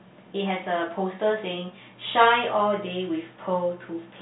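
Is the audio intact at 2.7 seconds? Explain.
Yes, the audio is intact at 2.7 seconds: the speech passes through cleanly, carried in the narrow telephone band of G.711 telephone coding with nothing above roughly 3.9 kHz.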